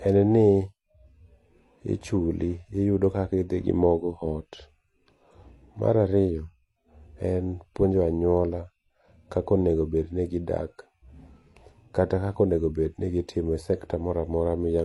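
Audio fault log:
throughout, transcoding between lossy codecs: likely MP3 audio re-encoded as HE-AAC, so both codecs' artefacts stack on the speech and nothing remains above 11.4 kHz.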